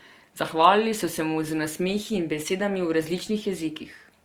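A speech recording with a grainy, rough texture across its whole length: high frequencies stay present up to about 20.2 kHz but sound noisy, not hollow or swirling. That points to Opus compression, likely in its music mode at a rate that fits roughly 24 kbps.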